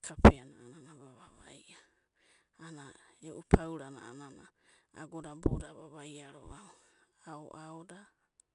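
Throughout, the speech carries plainly audible 4-bit ADPCM compression. Each sample is coded as a coarse step from a predicted value, so a gritty hiss rides on every loud syllable and drops away in pauses, unlike steady tape hiss. Nothing sounds above 10.6 kHz.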